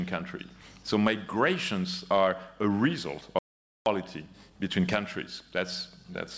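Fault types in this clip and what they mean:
Clock drift between sender and receiver: the sending clock runs roughly 4 percent fast throughout, so the error builds steadily in one direction, unlike random network jitter.
Repeated timing corrections: from 0.21 to 6.14 s the receiver trims short pieces to keep pace at 105 percent speed, heard, if at all, as slight, unevenly spaced hiccups rather than shifted pitch.
Audio dropout to silence: from 3.39 to 3.86 s the sound cuts to silence with no room tone left, likely a lost input link, not a smoothed-over concealment gap.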